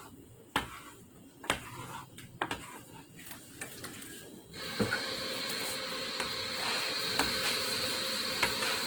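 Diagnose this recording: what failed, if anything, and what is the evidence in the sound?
The codec stage is the likely cause: Opus compression in its music mode, starved of bits in a way that fits roughly 16 kbps. Across the whole clip, band energy is kept but filled with folded or noise content, so the sound turns audibly grainy and rough while content still reaches about 20.1 kHz.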